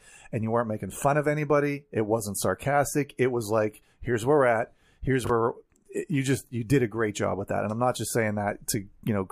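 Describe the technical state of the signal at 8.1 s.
At 8.1 s the signal is intact, with no technical fault audible at that moment.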